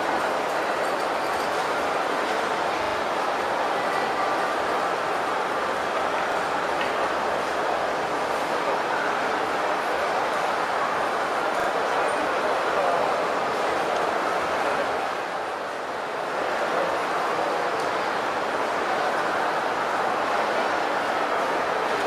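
At 2.84 s, 6.32 s and 11.6 s the audio stutters with a repeated buffer. Fresh audio arrived late, so the output replayed the last block, which sounds like roughly 40 ms, three extra times, then once, then twice. Each repeat meets the previous one at a hard join, so there is a brief stammer. The waveform shows identical copies butted together, and the spectrogram shows vertical broadband lines at each join.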